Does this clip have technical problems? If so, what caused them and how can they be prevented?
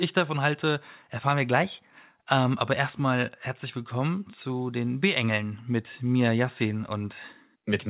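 No, nothing in this clip points to a technical fault. The audio has passed through a call path whose sound stops at about 4 kHz, as expected from a narrowband telephone codec such as G.711 mu-law at 64 kbps.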